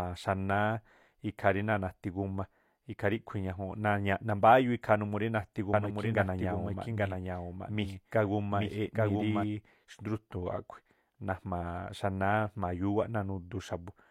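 Between 5.73 and 9.43 s there's a doubled audio track: a copy about 5 dB down, trailing roughly 0.7 s behind, likely from a slower second capture.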